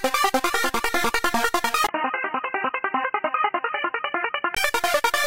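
At 1.87 s a gap of about 20 ms opens, and from there until 4.57 s the sound turns dull and boxy, with nothing above 3 kHz. This is likely an input switched to a poorer device, such as another microphone or a headset's call profile. The loudness stays about the same, but a new noise floor appears, about 35 dB below the sound. That short gap at the switch, together with the changed background noise, is what separates a device change from a plain low-pass filter or a codec bandwidth drop.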